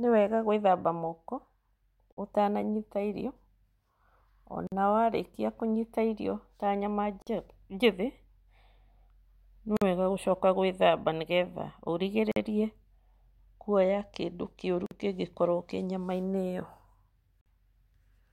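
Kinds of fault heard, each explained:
gap between chunks: the speech stops for 48 ms after every 2.5 s chunk, showing as regularly spaced, hard-edged blank vertical strips in the waveform and spectrogram.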